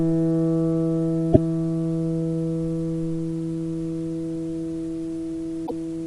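A recording of sounds carries two brief bursts of damaged data in a compressed stream, at 1.29–1.38 s and 5.63–5.71 s, each about 80 ms long. Corrupted bytes made the decoder misread frames and lose sync, leaving abrupt, smeared blocks on a spectrogram and sharp discontinuities in the waveform.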